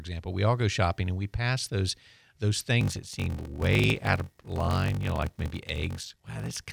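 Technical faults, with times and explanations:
2.79 s to end: block size mismatch (padded). Each block's zero-filled tail causes a 46.9 Hz buzz and slows the speech to 0.861x, consistent with 1024-sample reads.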